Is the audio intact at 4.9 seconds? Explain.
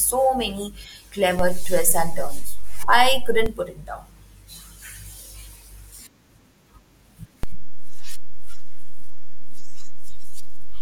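Yes, the audio at 4.9 seconds is intact, with no fault audible at that moment.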